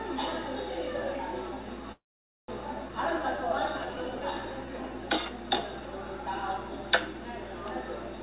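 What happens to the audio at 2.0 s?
At 2.0 s the sound stalls in a call audio freeze, from 1.92 to 2.50 s. The last sound carries on briefly as a fading buzz or hiss, then drops to silence for about half a second. The likely cause is late packets draining the jitter buffer. When the audio resumes, it picks up where it stopped, so nothing is lost. Everything after is shifted about 0.56 s later.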